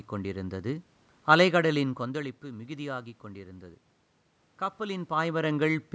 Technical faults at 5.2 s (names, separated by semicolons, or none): none